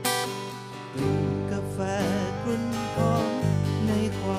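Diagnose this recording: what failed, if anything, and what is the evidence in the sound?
From 2.37 s to 3.53 s the whole sound jumps about 5.3% faster and roughly 90 cents sharp, close to a semitone, then returns to normal pitch and tempo. Speed and pitch move together and switch abruptly, which points to a drift correction step at the buffer stage. That's likely clock-matching software that changed the playback rate in one jump to drain its buffer, rather than adjusting smoothly.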